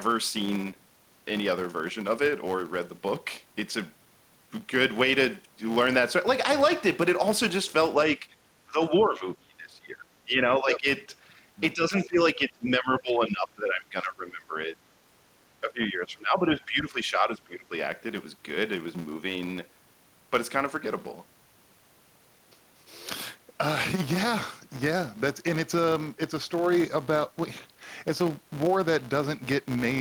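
Throughout the speech, a filter restarted on every block leaves a buzz near 188 Hz that tracks loudness, consistent with 256-sample blocks; spectrograms show evenly spaced vertical clicks. Speech suppressed in double talk, likely from an echo canceller ducking both talkers, dips the voice at 8.18–8.26 s (slightly), 8.66–10.07 s, 10.23–10.87 s, 11.58–14.76 s and 15.61–17.73 s, up to about 20 dB, appearing as waveform troughs.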